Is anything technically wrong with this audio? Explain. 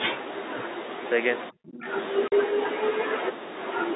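Yes, there are two faults.

From 1.51 to 1.88 s the speech level suddenly sinks, by about 40 dB at its deepest, and the affected stretch totals roughly 0.4 s. The voice dips before recovering. This is likely speech suppressed in double talk: while the far end was also talking, the echo canceller mistook the local voice for loudspeaker echo and attenuated everything. A waveform shows the envelope collapsing to a thin trace, and a spectrogram shows the harmonics fading.

From 2.28 to 2.32 s, 40 ms of audio is replaced by silence. This is packet loss filled with silence, consistent with two consecutive 20 ms packets going missing. The receiver inserted silence instead of concealing the gap, so the sound stops dead and resumes with hard edges. The waveform shows a flat line with abrupt vertical cuts. The spectrogram shows a blank vertical strip.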